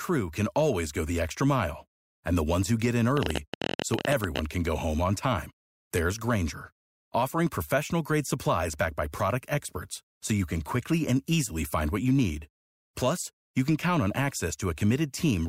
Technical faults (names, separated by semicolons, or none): train of clicks